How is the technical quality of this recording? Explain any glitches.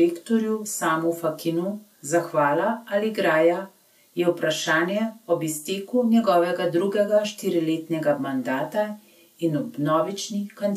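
The speech recording shows no technical glitches: the signal holds steady and continuous throughout, with nothing audible that breaks or disturbs it.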